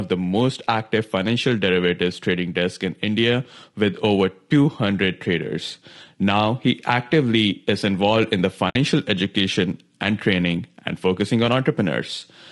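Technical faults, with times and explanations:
Throughout: low-delay AAC compression. The speech sounds rough and grainy, with noise filling the gaps between harmonics. The top band is lowered or sounds synthetic. This is likely low-delay AAC coding, which fits a bitrate of around 32 kbps.
8.69 to 8.76 s: AAC frame loss with muting. A soft-edged hole about 60 ms long interrupts the speech. The decoder zeroed the missing spectrum. Overlapping windows fade the sound out and back in. This fits about three lost frames.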